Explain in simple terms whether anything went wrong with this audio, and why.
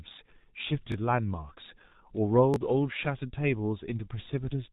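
Two things went wrong. The whole recording passed through the G.723.1 codec, an old low-rate internet-telephony codec. It keeps nothing above 3.8 kHz and updates its speech model slowly, so the speech sounds muffled and hoarse, with smeared consonants.

There are also two repeated buffers, from 0.92 to 0.94 s and from 2.54 to 2.56 s. Each time, fresh audio arrived late, so a roughly 20 ms chunk played one extra time, which fits a 20 ms buffer. You hear a brief stutter or click with a hard join.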